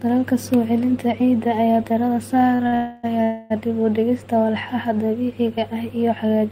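Right after "celinta ciidda ayaa diiradda" you get two short stalls from a late packet, at 2.55–2.61 s and 2.67–2.74 s. The jitter buffer ran dry, so the receiver held the last sound for about 40 and 50 ms, then carried on from the same spot. Nothing's lost, just slightly stretched and buzzy.

Straight after that comes a call audio freeze from 2.74 to 3.05 s, and another from 3.23 to 3.52 s, each close to 0.3 s. The last sound is drawn out into a fading buzz rather than going silent. Then the audio resumes where it stopped, likely because packets were held up in transit.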